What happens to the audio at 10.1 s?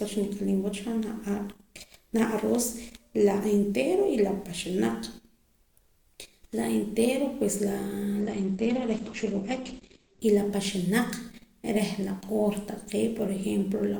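At 10.1 s the adaptive stream is still at a lower bitrate, from 8.20 to 10.20 s, after the connection slowed. The sound points to a drop from roughly 64 to 12 kbit/s Opus. Nothing above 8.4 kHz survives, so the treble goes dull and smeared from just before "y la paxanaq" until full quality snaps back at 10.20 s.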